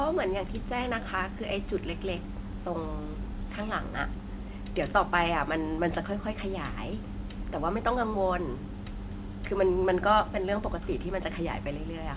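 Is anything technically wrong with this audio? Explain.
No, nothing stood out on listening to this speech beyond the narrow band you would expect from ordinary A-law telephone coding.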